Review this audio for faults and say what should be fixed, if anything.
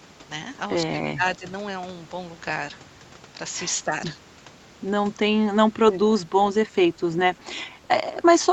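Speech suppressed in double talk shows up at 1.04–1.44 s (the deepest, about 20 dB), then 3.85–3.93, 5.51–5.58, 6.1–6.32 and 7.79–7.88 s with smaller dips. This is likely the echo canceller ducking the talker while the far side spoke. Worth tuning its double-talk detection so it stops attenuating near-end speech that overlaps.

Echo leak appears as faint delayed copies at 5.93–5.98 and 6.68–6.72 s, about 285 ms behind and roughly 30 and 35 dB down. This is likely loudspeaker pickup the canceller didn't fully remove. Better canceller convergence, or headphones on the far end, would stop it.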